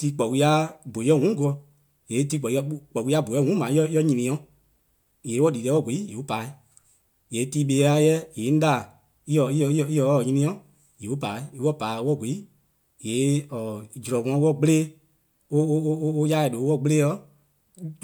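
No technical faults can be heard anywhere in the speech recording.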